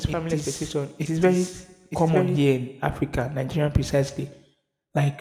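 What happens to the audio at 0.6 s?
At 0.6 s you're inside a doubled audio track that runs from the very start to 2.54 s. A full-band copy trails the original by about a second, roughly 5 dB down, with no room colour, likely from a second capture path. It cuts off abruptly right after "family expectation".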